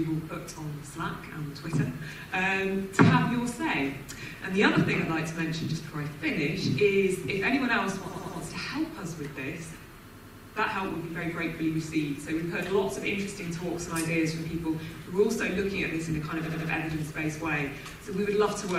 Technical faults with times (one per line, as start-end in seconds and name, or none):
8.07-8.37 repeated frames
10.13-10.53 repeated frames
16.45-16.69 repeated frames